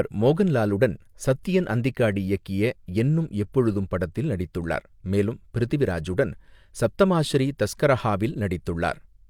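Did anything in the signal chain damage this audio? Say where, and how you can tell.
No, the signal chain left this speech recording intact, with no audible damage at any stage from capture through playback.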